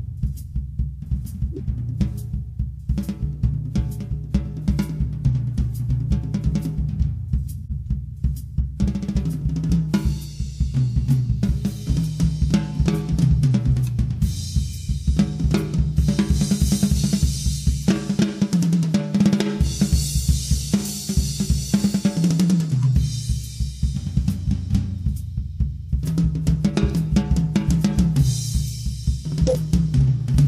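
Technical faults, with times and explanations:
1.52–1.60 s, 7.58–7.72 s, 22.70–22.83 s and 29.47–29.56 s: corrupt frame decoded. Each time, a short run of damaged compressed frames (about two to five) was played as if valid. Misread codes and gains put energy at the wrong frequencies, so each event sounds like a brief chirp, blip or noise burst. The event at 29.47 s is the loudest.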